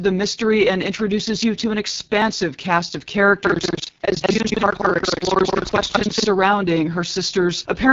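AMR wideband (HD Voice) codec damage runs through the whole clip: the speech has a rough, raspy, buzzy texture, which fits the codec's lowest 6.6 kbit/s mode. Its pulse-driven vocal tract model can't track the speech finely at that rate, and nothing sounds above 7.3 kHz.

Audio missing between chunks at 2.22 s: a skip of roughly 15 ms falls between "introduces you to an" and "cast of", with the two sides butted together. It is likely the recorder losing a sliver while closing one 3-second chunk and opening the next.

Buffer tearing from 3.42 s to 6.28 s, starting right after "cast of": a robotic rattle at 21.5 Hz sits on the speech, which fits a 2048-sample buffer. The writer and the hardware reader have slipped, so somewhat under half of each period replays audio from around a fifth of a second earlier, with hard joins on both sides.

Audio missing between chunks again at 5.21 s, inside the tearing and exactly 3 seconds after the first: another roughly 15 ms skip, likely from the same chunk handover.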